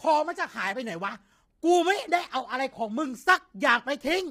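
Low-delay AAC compression runs through the whole speech clip, from start to finish, and is heavy throughout. The voice sounds rough and grainy, with a hiss of noise filling the gaps between the pitch harmonics and a dulled, somewhat synthetic top band. This likely comes from a low-delay codec such as AAC-ELD working at a low bitrate, around 24 kbps. At such a low bitrate too few bits remain for fine detail.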